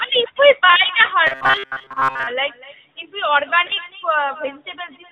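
From start to finish, every utterance is followed by a quieter copy of itself, delayed by roughly a fifth of a second and sitting about 19 dB below the direct sound. This is echo with no canceller: the far end is playing the call through a loudspeaker, its microphone picks that playback up, and nothing removes it before it returns over the network. The returning copy sounds thinner than the original.

Also present throughout is the AMR narrowband mobile codec, and its damage is plainly audible. The band stops at 4 kHz, so sibilants and upper consonants are dull and lisped. The sound has the buzzy, synthetic texture of a pulse-excited vocal-tract model. That degree of coarseness fits a mid-range AMR-NB mode of around 10 kbps.

Between 1.27 and 2.27 s the sound turns into a rigid metallic drone at 133 Hz, with the original sound only loosely traceable underneath. This is robotic sound from repeated short buffers. 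A buzz at 133 Hz means a segment of about 7.5 ms is being looped. The likely cause is audio arriving too seldom, so the player fills the gaps by repeating its last short buffer. Most of the real audio in this stretch, roughly two thirds or more, is skipped outright.

At 3.7 s there is a brief dip and warble lasting a few tens of milliseconds. This is lost AMR speech frames, here consistent with a single 20 ms frame discarded after a radio error. The decoder covers the gap by reusing the previous pitch and vocal-tract settings at reduced gain. Because only one frame is missing, the sound does not fade to silence. It wobbles briefly and then recovers, slightly rough for a moment.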